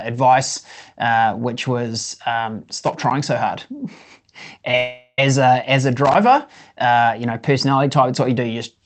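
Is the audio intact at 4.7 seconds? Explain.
No. From 4.71 to 4.74 s there is a short concealed packet loss: a few hundredths of a second of the speech arrived too late to decode. The receiver bridged the gap by extending the preceding sound, so it is heard as a brief smear or wobble. On a waveform it looks like a slightly too-regular patch; on a spectrogram, the harmonics run smoothly where there should be detail.

Right after, from 4.77 to 5.19 s, the sound turns into a buzz or hiss that fades over about 0.4 s, with a short near-silence before the speech returns and the missing part never comes back. A long network dropout is the likely cause. On a spectrogram it shows as a blurred, fading smear, and on the waveform as a decaying envelope.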